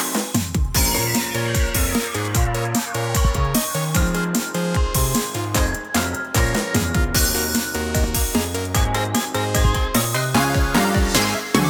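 A short, regular tick cuts through the sound every 2.0 s, beginning at 2.03 s and continuing until about 10.05 s, around five clicks in all. These are periodic USB or driver dropouts. At a fixed interval something held up the USB bus or audio driver, and each time a couple of milliseconds of audio went missing and was filled with silence. The abrupt gap and the jump back into the signal are what make each tick.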